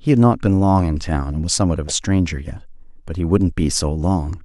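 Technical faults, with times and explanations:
1.88 to 1.92 s, corrupt frame decoded: a 40 ms burst, peaking near -10 dBFS, lands on the speech. It spans a few damaged codec frames. Flipped bits sent misread gains and codes, placing energy at wrong frequencies. A dropout would leave a gap instead.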